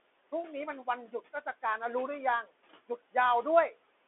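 From start to finish the speech runs through a Bluetooth CVSD headset codec, a one-bit delta modulator whose step size adapts, which fits a 64 kbps link. The sound is thin and boxed in, limited to roughly 300 Hz to 3.5 kHz with nothing above 3.8 kHz, and the codec damage is plainly audible: scratchy s sounds, roughness on loud bright moments, and a granular hiss under the speech, with the room noise about 20 dB down. A spectrogram shows a hard ceiling near 3.8 kHz and an empty low band.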